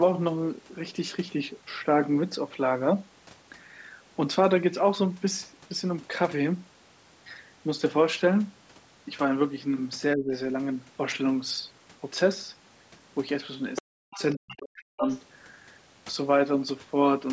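From 10.15 to 10.33 s the speech dips by about 20 dB, and from 13.81 to 15.05 s it falls by about 40 dB. This is likely speech suppressed in double talk: the echo canceller turned the talker down along with the loudspeaker echo. A second voice, likely the other side's voice leaking through as residual echo, surfaces at 13.75–13.82 s, 14.13–14.22 s and 15.04–15.21 s, about 10, 25 and 10 dB below the speech, and is distinct from steady background chatter.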